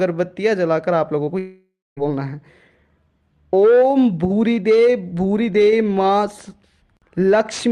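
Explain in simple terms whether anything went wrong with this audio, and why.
Yes, two things went wrong, close together near the start.

At about 1.25 to 1.29 s there is a short concealed packet loss. A sliver of sound, about 20 ms, arrived too late to be played, so the receiver guessed at it by stretching the sound just before. You hear only a tiny smear or wobble. What sets it apart from the next fault is that it is over almost instantly.

From about 1.39 to 1.99 s the sound breaks up for over half a second, which is likely a long network dropout. The receiver first carries the last sound forward as a fading buzz or hiss, but it cannot keep guessing that long, so roughly a quarter second of silence follows. The audio then picks up at 1.99 s with that stretch simply gone. The length and the silent gap are what distinguish this from the brief blip before it.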